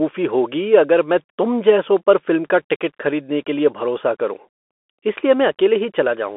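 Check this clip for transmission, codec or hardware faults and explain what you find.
One fault runs through the whole speech clip: the Bluetooth CVSD headset codec. Throughout, a one-bit delta coder, consistent with a 64 kbps link, tracks the waveform in adapting up-down steps. The band sits between 250 Hz and 3.4 kHz, with a spectrogram showing nothing above 3.8 kHz. Sibilants sound scratchy, a granular hiss sits underneath, and loud peaks look slope-clipped on the waveform.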